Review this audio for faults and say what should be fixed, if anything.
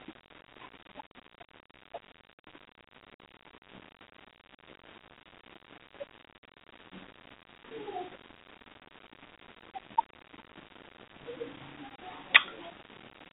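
Nothing here needs fixing: the speech comes over an ordinary G.711 telephone path, with the narrow line band of roughly 250 Hz to 3.5 kHz and nothing above about 3.7 kHz, which is simply how that channel sounds.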